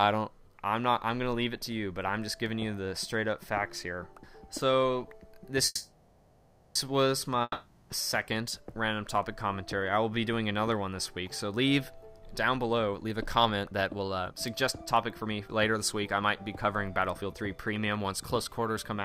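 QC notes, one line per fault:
5.65–6.78 s, call audio freeze: packets were likely held up and the jitter buffer ran empty, so the last sound stretches into a fading buzz for about 1.1 s, then resumes with nothing lost.
7.42–7.93 s, long network dropout: packets likely never arrived, so the sound decays into a fading buzz and near-silence, and about 0.48 s of audio is gone when playback returns.
12.20–14.37 s and 14.78–19.03 s, jitter buffer speed-up: the receiver trimmed pitch-period slices to shed excess delay, playing at 126% then 111% speed, hurried at unchanged pitch, removing roughly half a second each time.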